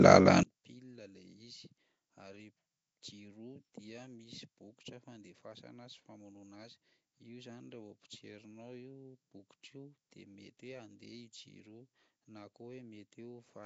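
Nellymoser compression runs throughout. The speech has a rough, hissy halo and an underwater smear, with nothing above 7.8 kHz. This likely comes from Flash's Asao codec at a rate that fits 32 kbps. One channel inverted, from 0.43 s to the end: in a mono sum the speech drops by about 35 dB, leaving a faint remnant, likely because one channel's polarity was reversed.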